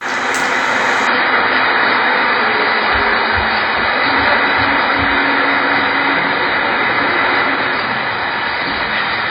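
At 1.07 s the adaptive stream drops to a lower bitrate until the end: treble vanishes above 5 kHz and codec artefacts thicken, a sudden seamless switch with no gap, unlike a dropout.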